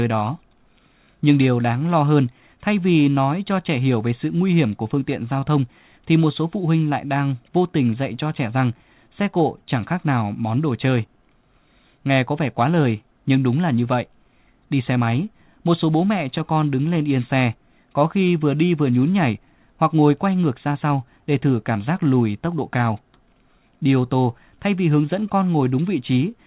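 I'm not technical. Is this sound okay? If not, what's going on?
No. Clock drift between sender and receiver runs through the whole recording. The device that sent this speech kept time with its own clock, and that clock ran about 4 percent slow compared with the receiving end. The receiver's waiting area for incoming sound kept running short, so it had to keep stretching what it had. The result is a slightly dragging, uneven pace with small stumbles scattered through the clip.

Repeated timing corrections can be heard from 0.05 to 26.3 seconds. To keep up with the slow sender, the receiver kept repeating tiny slivers of sound, always in the same direction but at irregular moments. Altogether these repeats add roughly a second, and the speech plays at about 96 percent of its proper speed. Each repeat is brief, so they come across as faint hiccups and a wobbly rhythm. The narrow, phone-like tone comes from the call line, which carries nothing above 4 kHz.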